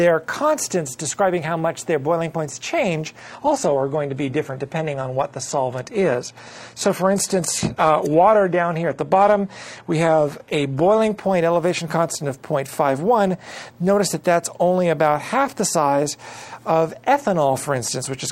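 From 3.21 to 11.21 s the audio suddenly coarsens, losing everything above 14.9 kHz, then recovers without a gap: an adaptive stream at a lower bitrate while the connection slowed.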